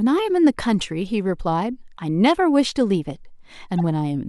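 A faint blip at 1.08 s and a louder squeak from 3.78 to 3.80 s are corrupt frames that were decoded anyway. Flipped bits threw energy to the wrong frequencies, and each burst's brevity fits a couple of damaged frames.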